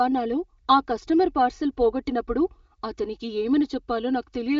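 From start to finish, one channel runs late by roughly 3 ms, and when the two channels are folded to mono that offset produces channel delay comb filtering. The shared speech content cancels at evenly spaced frequencies, with the first notch near 200 Hz and more repeating up the spectrum. The voice comes across hollow and phasey, through an AMR-WB wideband path whose band stops around 7.4 kHz.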